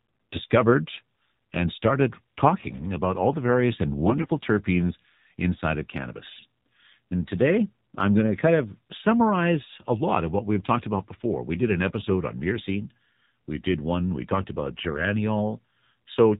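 AMR narrowband mobile codec, present from start to finish: the speech has passed through AMR-NB, the 2G/3G phone codec, at a rate whose plainly audible damage fits its 7.4 kbps mode. Sampling at 8 kHz leaves nothing above 4 kHz, so sibilants and breath lose their top. The voice is rebuilt from a vocal-tract model excited by a sparse set of pulses every few milliseconds, and at this bit budget that leaves it buzzy and somewhat synthetic.

AMR bit errors strike three times: 4.03 to 4.32 s, between "all the various and" and "terpenes inside of"; 6.34 to 6.46 s, just after "terpenes inside of"; and 14.91 to 15.02 s, after "one we talked about". Flipped bits, at roughly 5 percent, corrupted the weakly protected parts of frames while the core checksum still passed. Misplaced excitation pulses and skewed fine gain and spectral values keep pitch and loudness roughly intact but make the voice turn hoarse, scratchy and gargly for those moments.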